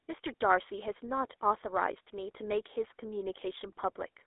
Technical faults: GSM full-rate codec

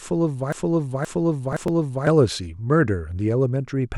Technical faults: broken-record loop; processor overload crackle

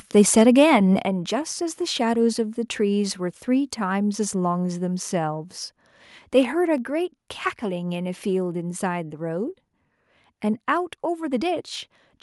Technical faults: microphone overload; microphone volume stepped down

